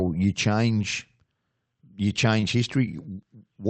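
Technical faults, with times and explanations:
2.40 to 2.56 s, short concealed packet loss: part of the speech reached the decoder too late. The receiver filled about 18 ms by extending the sound just before it, then blended back into the real signal. This leaves a brief smear.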